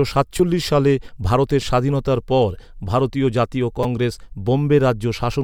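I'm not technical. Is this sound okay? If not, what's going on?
No. Three tiny glitches come from a repeated buffer: the playback device didn't receive fresh audio in time, so it replayed its last slice of about 5 ms. At 0.38 s (just before "সালে ভারতের স্বাধীনতার পর") and at 1.62 s (after "সালে ভারতের") that slice plays twice extra. At 3.83 s (after "স্বাধীনতার পর ভারতীয় জাতীয়") it plays three times extra. Because the slices are so short, each glitch sounds like a click or brief buzz, not a gap of silence as in a dropout.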